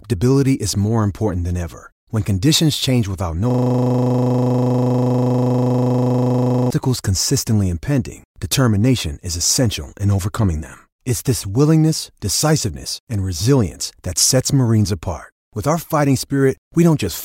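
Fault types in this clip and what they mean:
System hang loop: the playback system froze while the audio hardware kept replaying one 40 ms slice of its buffer, repeating it 80 times at 25 Hz from 3.50 to 6.70 s, so the speech gives way to a rigid buzz. Unlike a stutter or dropout, every repeat is identical.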